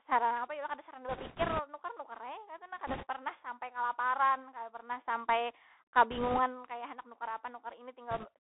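Throughout the speech, the Bluetooth CVSD headset codec confines everything to a band from 250 Hz to 3.6 kHz, consistent with a 64 kbps one-bit delta stream whose adaptive step lags sharp changes. S sounds turn scratchy over a grainy hiss, and a spectrogram shows a hard ceiling at 3.6 kHz with a speckled noise floor.

Bit errors on a Bluetooth voice link appear from 1.09 to 1.60 s, 2.87 to 3.05 s, 6.11 to 6.39 s and 8.11 to 8.27 s, at rates of around 5%, 7%, 3% and 3%. Because each flipped bit only nudges the step and its effect fades, there are no sharp clicks, just rushing crackle. The waveform thickens with fuzz rather than spikes, and the spectrogram shows broadband smears across the passband.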